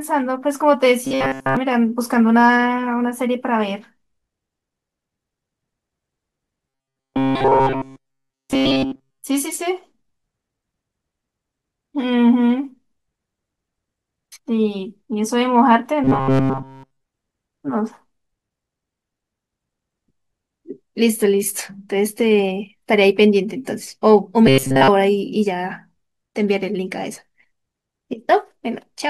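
Speech that turns into a rigid, metallic buzz pitched near 134 Hz from 1.05 to 1.57 s, 6.69 to 9.24 s, 16.04 to 17.03 s and 24.47 to 24.89 s: robotic sound from repeated short buffers, likely a roughly 7.5 ms slice looped throughout each stretch.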